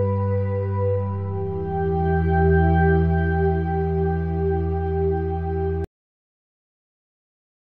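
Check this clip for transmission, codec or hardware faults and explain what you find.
One fault is present. Cut-off end at 5.84 s: the final buffers never reached the output, so the sound stops mid-event and drops straight to digital silence without any decay.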